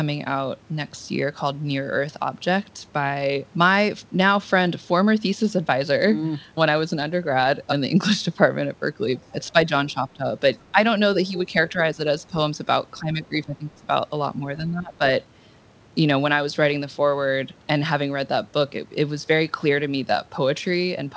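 At 9.14 to 9.26 s a faint second voice comes through for a brief moment, far below the main talker at around 30 dB down. This is other side's voice leaking through, where the echo canceller likely left a residue of the loudspeaker signal in the microphone.

Right after, the main speech is repeatedly pulled down: from 9.32 to 10.25 s, at 10.71 to 10.78 s, from 11.47 to 12.0 s, from 13.0 to 13.88 s, and from 14.58 to 15.02 s. The dips range from a slight drop to around 20 dB, deepest near 14.6 s and longest near 13 s. This is speech suppressed in double talk, with the canceller likely unable to separate its own talker from the echo and turning both down. The G.722 call path stops everything above 8 kHz throughout.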